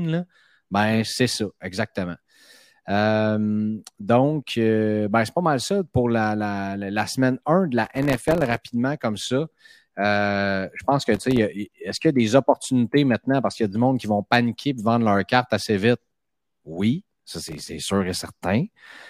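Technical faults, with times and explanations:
7.85–8.70 s, 11.15–11.39 s, 17.49–17.69 s, processor overload crackle: gritty tearing crackle bursts, the first between "de la" and "comme ça", the second after "je pense que". The processor missed dozens of millisecond-scale buffer deadlines, each leaving a hard-edged silent gap.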